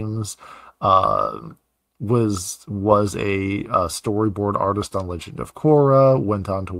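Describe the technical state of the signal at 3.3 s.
At 3.3 s the audio is intact, with no audible fault in the signal at that moment.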